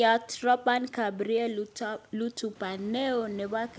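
No technical faults are audible.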